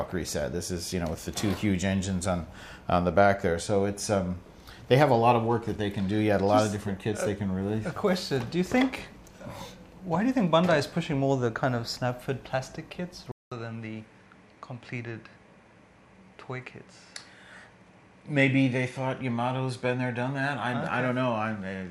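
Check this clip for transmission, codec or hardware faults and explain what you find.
One fault is present: from 13.32 s to the end, the input likely switched to a poorer device. A 200 ms silence marks the changeover, after which the audio is roughly 5 dB quieter and nothing remains above 11.4 kHz, so the top end turns dull. A different, faint noise floor appears, around 50 dB below the signal. A replacement microphone or headset path brings its own narrower bandwidth, gain and self-noise, which accounts for these changes.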